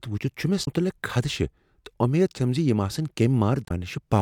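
Damaged data in a compressed stream garbles this speech recording at 0.61–0.67 s and 3.64–3.71 s, where corrupted frames make the decoder misread and resynchronise, producing brief glitches.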